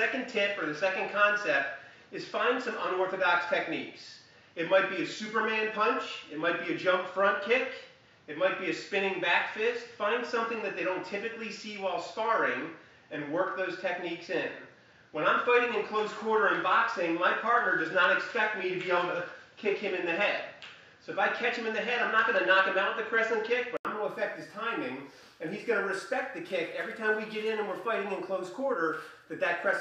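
Until 23.85 s the sound is dull, with nothing above 7.3 kHz and faint hiss. An 80 ms gap then precedes clearer sound, likely an input switched to a poorer device.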